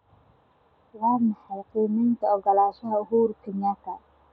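No technical faults can be heard anywhere in the speech.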